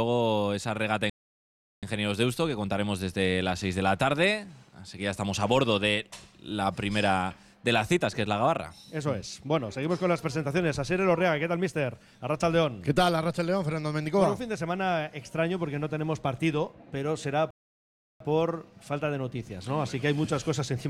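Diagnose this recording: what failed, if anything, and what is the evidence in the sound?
The sound cuts out mid-flow twice, going silent from 1.10 to 1.83 s (about 0.73 s) and from 17.51 to 18.20 s (about 0.70 s), then resuming. This is a playback stall, likely the player starving for data or its thread being blocked.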